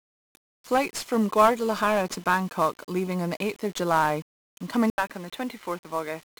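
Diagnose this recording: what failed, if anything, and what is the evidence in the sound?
USB whine runs through the entire recording, pointing to the analogue wiring, specifically the power or ground path shared with a USB device. A fixed tone sits at 1 kHz, with its strongest component at the 3 kHz harmonic, about 40 dB below the speech. The USB host polls the bus in 1 ms frames, so the current it draws pulses at 1 kHz. That ripple couples into the audio ground and appears as a steady whine with its harmonic series.

1-bit DFPWM compression is the codec-stage fault, and the damage is heavy from start to finish. The speech sounds fuzzy and crackly throughout, with the upper frequencies buried under broadband hiss. DFPWM encodes each sample as a single bit that pushes an adaptive predictor up or down, and this sound fits a stream of roughly 48 kbps. With so little resolution, quantisation error spreads across the band as coarse, dense noise.

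From 4.9 s to the end, the input appears to have switched to a poorer device, likely an automatic change of capture device partway through the recording. An 80 ms gap of silence marks the switch. After it, nothing is present above 4.2 kHz, so the speech turns dull and boxy. The level drops slightly, and a different background noise appears, roughly 45 dB below the speech. The narrower band and the new tone both point to a lower-grade microphone path.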